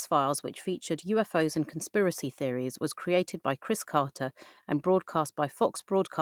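Nothing goes wrong in this speech clip; it's simply Opus running at 24 kbps in hybrid mode with the full band kept, reaching up to about 20.4 kHz.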